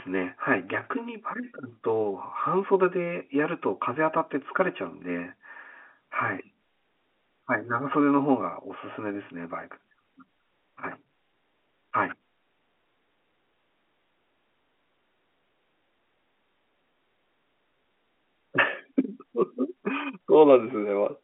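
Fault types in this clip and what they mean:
No faults can be heard in this speech recording.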